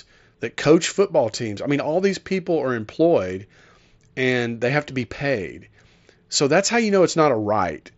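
Nothing stood out on listening to this speech recording.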